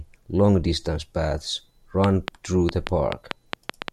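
A speech recording with a train of clicks, likely from interference from nearby equipment or a faulty connection or power supply, from 2.04 s to the end at 3.92 s. About ten similar pops arrive at an uneven rate of 5.7 per second, some peaking roughly 20 dB above the speech.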